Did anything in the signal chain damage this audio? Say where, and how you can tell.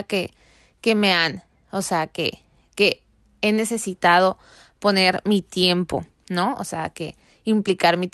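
No, nothing in the signal chain damaged this speech.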